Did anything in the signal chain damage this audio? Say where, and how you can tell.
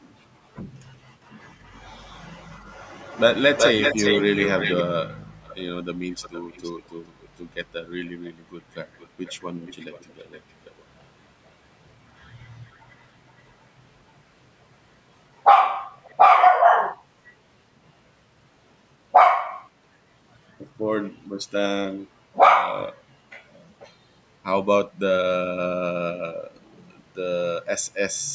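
Yes. A delayed copy of the speech trails it at 1.41–4.83 s, 377 ms late and nearly as loud. Then fainter copies, 458 ms late, appear at 5.42–7.28, 8.06–10.84, 12.70–13.03 and 15.97–16.17 s. This is echo leak in call processing, likely a loudspeaker-side echo canceller letting its pickup return.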